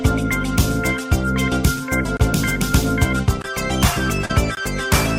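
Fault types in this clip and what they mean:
Block of digital silence: The program likely failed to deliver a full output buffer in time, so a run of samples went out as zeros. The sound drops straight to digital silence and returns with no fade. It is heard as short holes at about 2.17 s (roughly 28 ms long), 3.42 s and 4.55 s (each about 21 ms, which fits a 1024-sample buffer).
Short concealed packet loss: About 40 ms of the stream never reached the decoder in time, between roughly 4.25 and 4.31 s. The receiver covered the gap by extending the last sound it had received, continuing its pitch or generating shaped noise, for about 39 ms before blending back into the real signal. Instead of a hard cut to silence, the result is a brief smeared stretch where the actual content is missing.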